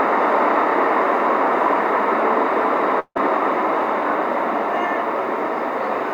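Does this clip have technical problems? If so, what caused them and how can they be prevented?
Yes. From 2.99 to 3.17 s, the sound gives way to a fading buzzy continuation, then about 60 ms of silence before resuming with roughly 160 ms missing. This is likely a long network dropout. On a spectrogram, smeared harmonics decay into a blank band; the waveform shrinks to flat. A larger jitter buffer with redundancy or retransmission on the link would help prevent it.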